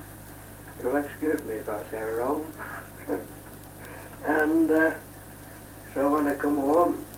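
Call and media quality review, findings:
Clock drift between sender and receiver, whole clip. Sender clock roughly 4 percent fast, so the receiver's jitter buffer keeps filling. Unlike packet loss, there are no gaps or muted holes. The fault is steady, one-directional timing pressure across the clip rather than isolated dropouts.

Repeated timing corrections, 0.16 s to 7.17 s. Small hiccups at uneven intervals as the receiver trims short pieces to hold a playback rate of about 104 percent. Pitch is unchanged, which sets this apart from resampling or a speed-up. Every correction goes the same way, unlike random jitter glitches.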